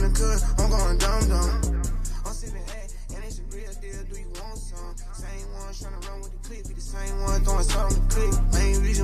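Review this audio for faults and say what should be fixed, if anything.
Zipper noise appears from 1.36 to 2.76 s and again from 6.8 to 7.4 s. In the first stretch the level falls by around 15 dB, and in the second it rises by a similar amount in 1 dB steps. Each time the gain jumps in discrete increments, roughly 30 times a second, instead of gliding. Every jump leaves a small click, producing a fast ticking that rides on the sound while the level moves. Applying gain changes with per-sample interpolation or a short ramp would prevent it.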